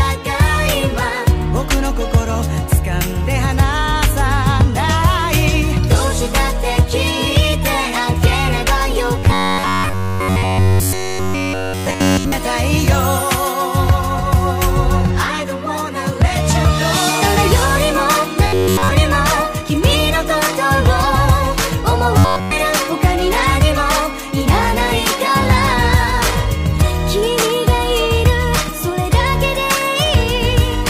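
From 9.18 to 12.32 s the sound collapses into a rigid, metallic buzz pitched at 93.8 Hz, then does it again briefly at 18.47 to 18.91 s and 22.18 to 22.52 s. That's the classic robotic sound from repeated short buffers. Essentially all of each stretch is a loop, likely a chunk of about 10.7 ms replayed while fresh audio wasn't arriving, so the buzz sits at one over that length and only loosely tracks the underlying sound.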